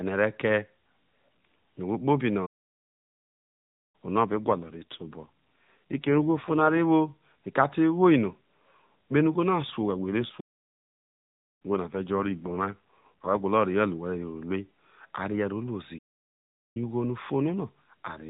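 At 2.46 s the speech cuts out for about 1.5 s and resumes at 3.95 s. It's a playback stall, most likely the player running dry or its thread getting blocked. From 4.24 to 6.78 s there's an AMR rate drop: the same narrowband AMR sound, no gap, but rougher and buzzier, which fits the link falling from 12.2 to 5.9 kbps to buy error protection. It happens again from 9.80 to 13.45 s, and inside that stretch another stall silences things from 10.40 to 11.62 s. A last, shorter stall runs from 15.98 to 16.77 s.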